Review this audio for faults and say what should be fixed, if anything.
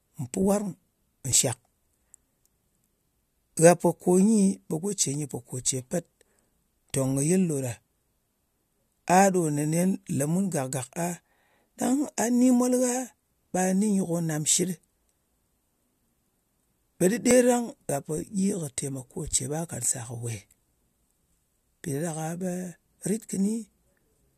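Two tiny skips occur in the speech, at 1.32 s and 17.31 s. Both come from overlap between stream segments. Adjacent 2-second segments claim the same time span. The player trims that span, so about 15 to 17 ms vanish and the waveform jumps. Fix it by aligning segment timestamps exactly at the packaging stage.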